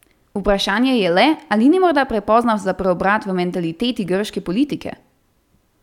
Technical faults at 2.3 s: corrupt FLAC frame

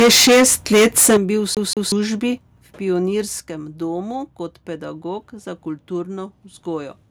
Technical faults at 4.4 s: none

